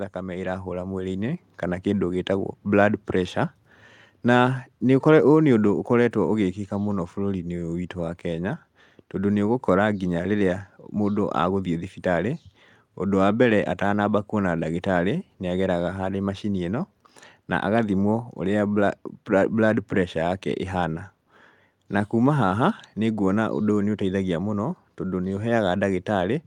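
A speech clip with automatic gain rising: from 0.13 to 11.95 s the gain control creeps up about 6 dB, so voice and background swell together.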